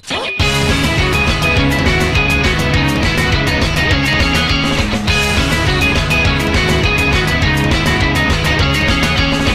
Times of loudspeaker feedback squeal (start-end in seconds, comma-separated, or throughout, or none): none